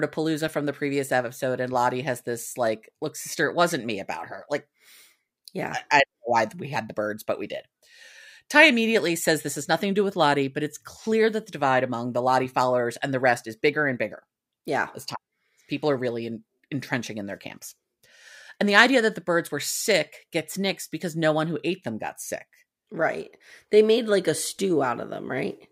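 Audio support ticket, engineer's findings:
Clock slip clicks, 1.21–24.76 s, after "from the previous": faint regular ticks about every 1.5 s, single-sample slips. Likely unsynced device clocks, roughly 15 ppm apart.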